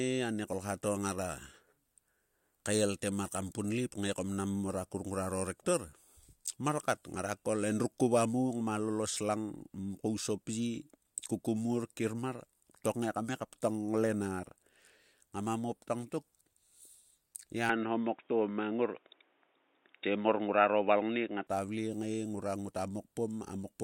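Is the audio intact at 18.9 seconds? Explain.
No. From 17.69 to 21.47 s the speech turns dull and boxy, with nothing above 3.8 kHz, a level shift of about 5 dB and faint new background noise. This is likely an input switched to a poorer device, a narrower-band device swapped in without a gap.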